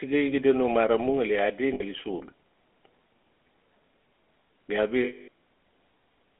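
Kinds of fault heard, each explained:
GSM full-rate codec: Throughout, a pulse-driven vocal-tract model gives the speech a buzzy, gravelly roughness within a roughly 250 Hz to 3.5 kHz band, fitting 13 kbps coding.
lost GSM frames: At 1.74–1.82 s, after "mara mu ngali adi", and 5.04–5.28 s, the last good frame is repeated, leaving a rough metallic ring.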